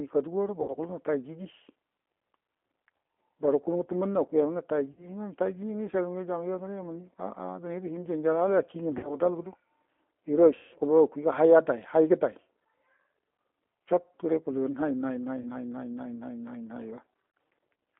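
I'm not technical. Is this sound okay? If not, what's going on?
No. The speech is squeezed through the G.729 codec, a phone-call compression that strips the highs and makes the voice sound rough and slightly robotic. VoIP packet loss concealed by the speech codec also hits at 0.62, 4.91, 8.98, 10.56, 15.41 and 17.30 seconds. At those moments the voice smears into a brief buzzy or noisy fade, longest at 10.56.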